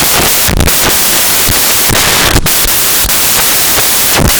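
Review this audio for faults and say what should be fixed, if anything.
The whole clip suffers from samples built from the wrong bytes. The reader is assembling each sample incorrectly, through a byte offset, swapped byte order or a wrong alignment assumption, so the rapidly changing low-order bits end up as the most significant part of every value. The result is loud, harsh broadband noise over the speech from start to finish. To prevent it, declare the sample format, endianness and alignment explicitly in the decoding path and verify them against the file header.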